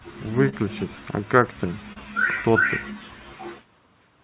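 It's a speech recording that's come through a call path: nothing above 4 kHz, which fits a narrowband G.711-style codec. There are two spots of short concealed packet loss, at 0.49 to 0.62 s and 1.93 to 1.97 s. Roughly 30 ms and then 20 ms of audio didn't arrive in time, and the receiver papered over each gap by stretching the preceding sound before easing back in. You hear a quick smear or wobble, and the first one also drops about 9 ms.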